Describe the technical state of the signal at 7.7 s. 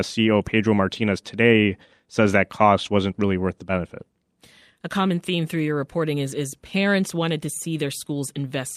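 At 7.7 s the speech signal is intact, with no audible technical fault at that moment.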